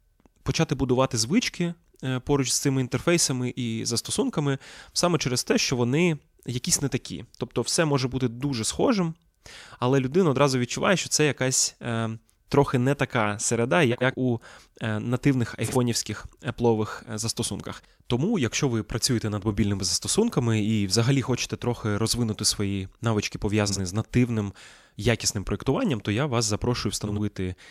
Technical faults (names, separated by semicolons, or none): frames out of order